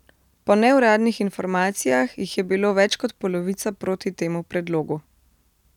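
No technical faults are audible.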